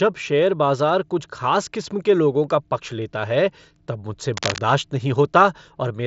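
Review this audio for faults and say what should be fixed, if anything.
From 4.34 to 4.58 s, just after "लेता है तब मुझसे", a burst of cable scratch noise cuts across the speech. It sounds like dense, uneven scratching, only a little quieter than the voice. The likely cause is a worn cable, plug or control being moved, so its contact resistance jumps about rapidly. The speech band tops out near 7.7 kHz, which fits a wideband Bluetooth headset link. To prevent it, replace or reseat the worn connection and keep it still while recording.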